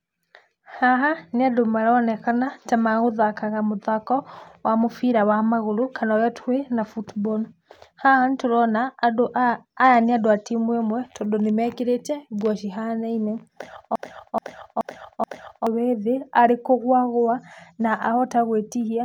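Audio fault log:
13.96–15.67 s, broken-record loop: a 428 ms fragment of the speech plays four times back to back, identical on each pass, and the speech that belonged in those 1.7 s is lost. Likely cause is a stalled player or stream resending its last buffered chunk.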